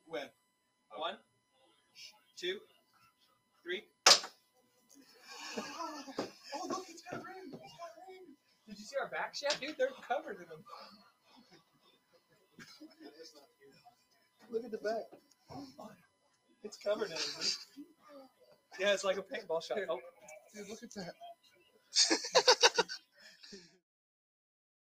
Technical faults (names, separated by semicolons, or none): USB whine; noise suppressor applied to music or sounds; sound cut by the noise suppressor